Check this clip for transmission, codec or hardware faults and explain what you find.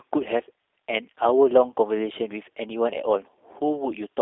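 One codec fault runs through the whole recording; there are no dropouts or hardware problems to report.

G.729 codec, throughout: the speech has been rebuilt from a vocal tract model, a pitch predictor and a sparse set of pulses per short frame, which fits an 8 kbit/s G.729A coder. Only a telephone band of 300 Hz to 3.6 kHz survives, with nothing above 3.7 kHz. The damage is plainly audible as a rough, slightly synthetic, buzzy texture and a muffled, narrow tone.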